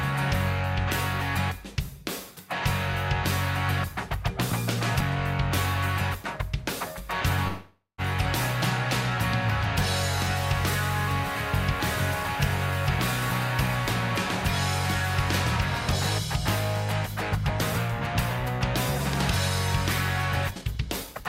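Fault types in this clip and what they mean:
call audio freeze: Delayed packets likely let the jitter buffer run dry at 7.47 s, so the receiver stretched the last sound into a fading buzz for about half a second, including around 150 ms of silence, then resumed at 8.01 s with nothing lost, just pushed later.
jitter buffer speed-up: With excess audio queued, the receiver trimmed repeated pitch-period slices to shrink the delay. From 20.51 to 21.26 s the sound plays about 125% fast at unchanged pitch, roughly a fifth of a second cut, giving a hurried feel.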